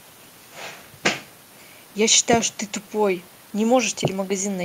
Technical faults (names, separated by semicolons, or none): none